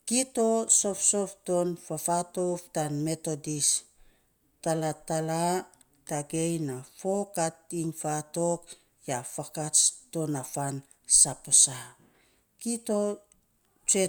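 Nothing goes wrong anywhere in this recording of speech; there's no technical fault to point to at any moment.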